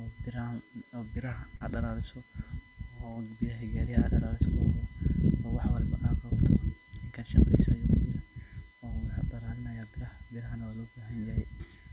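USB whine runs through the whole recording. Current drawn by the USB bus in 1 ms frames is leaking into the audio through the power or ground, laying a fixed-pitch tone on top of the speech. Its fundamental is 1 kHz, but the 2 kHz harmonic is the strongest part. It sits roughly 30 dB below the speech.

Short concealed packet loss occurs twice, from 1.56 to 1.63 s and from 3.12 to 3.19 s. Each time about 40 ms of the call arrived too late for the decoder. The receiver filled each gap by continuing the preceding sound, extending its pitch where it was voiced and using shaped noise where it wasn't, then blended back into the real signal. The result is a brief smeared wobble in the speech. Because the call codec passes nothing above 4 kHz, the filled sections carry the same dull top end as the surrounding speech.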